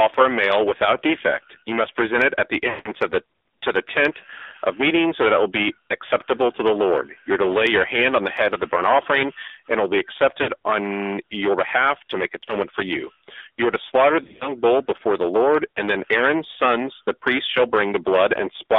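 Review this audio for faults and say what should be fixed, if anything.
Hard clipping, throughout: the speech is overdriven by about 14 dB, so around 7 percent of samples have flattened peaks, adding harsh high harmonics and fuzz on loud syllables.

AMR narrowband mobile codec, throughout: the speech is band-limited to roughly 300 Hz to 3.6 kHz and sounds buzzy and synthetic, consistent with low-rate AMR-NB near 7.4 kbps.

Lost AMR speech frames occur at 2.70 to 2.89 s, between "present it at the" and "of the to the", a drawn-out fade fitting about 160 ms of missing frames. They also occur at 10.42 to 10.50 s, at 12.44 to 12.52 s between "your behalf to make" and "for you", and at 14.24 to 14.51 s between "are to slaughter" and "bull before the", where short scattered dropouts produce warbles and dips as the decoder repeats the last good frame at falling gain.

To prevent these faults, reduce the input gain before conversion, record over a wideband or higher-bitrate link, and use a connection with a stronger signal so speech frames arrive intact.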